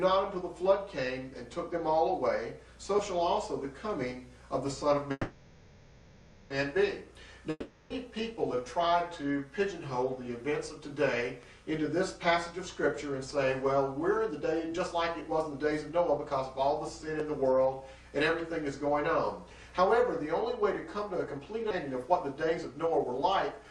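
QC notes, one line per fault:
5.11–6.52 s, call audio freeze. The audio stops moving forward for 1.39 s. The last sound is carried on and fades, with only about 30 ms of actual silence. It then resumes exactly where it stopped, so nothing is lost and the rest of the clip plays 1.39 s later. The likely cause is packets held up in transit, which let the jitter buffer run empty.
7.50–7.92 s, long network dropout. A gap of 0.4 s is filled by the last sound carried on and fading, with about 30 ms of silence. Here the audio comes back further along. The 0.4 s that should have played is gone. The likely cause is a stretch of packets that never arrived in time.
14.16–16.26 s, 20.94–21.60 s and 22.58–23.70 s, jitter buffer speed-up. The audio runs fast at unchanged pitch: 107%, 110% and 109%. All three sound hurried. The receiver trimmed tiny pitch-period pieces again and again to shrink a backlog. 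It removed about 150 ms, 70 ms and 100 ms.
21.70–21.73 s, skip ahead. Playback jumps forward with only a 10 ms join. About 0.4 s of audio is missing. The two sides meet almost directly. A stretch was dropped, in transit or by an overflowing jitter buffer, while later audio was waiting, cutting the delay by roughly that amount.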